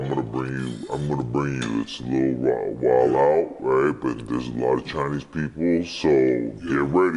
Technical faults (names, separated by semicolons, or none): wrong sample rate